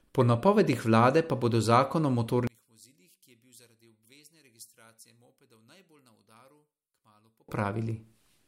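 From 2.47 s to 7.49 s, just after "pa bodo zakon o", the trouble is most likely one channel inverted: one side of the stereo pair has its polarity flipped, so when the two are summed to mono, everything they share cancels. The centred speech drops by about 33 dB and nearly disappears, leaving only a faint residue of the small differences between channels until full level returns at 7.49 s.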